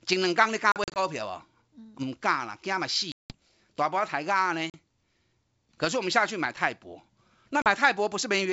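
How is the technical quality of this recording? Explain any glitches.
The speech is marred by packet loss on an ADPCM call, heard as dropouts at 0.72 to 0.99 s (short gaps totalling 120 ms), 3.12 to 3.35 s, 4.70 to 4.77 s and 7.62 to 7.68 s. Lost packets become silence, and the decoder's adaptive predictor and step size lose step with the sender's. Each hard-edged hole is followed by slightly distorted speech before the sound settles. The G.722 wideband coding, consistent with 64 kbit/s, still carries speech up to 7 kHz.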